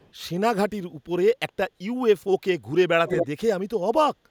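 From 0.0 to 0.11 s a very faint delayed copy of the speech trails by 280 ms, and at 3.08 to 3.27 s it returns much louder, near speech level. This echo leak is likely a far-end loudspeaker echo canceller letting residual pickup through.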